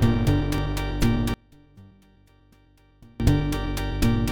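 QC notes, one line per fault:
1.34–3.20 s, one channel inverted: level falls about 31 dB, likely reversed polarity cancelling shared content when summed; waveform shrinks to a sliver, spectrogram goes nearly blank.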